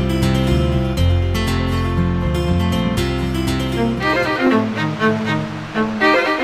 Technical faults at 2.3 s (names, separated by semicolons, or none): none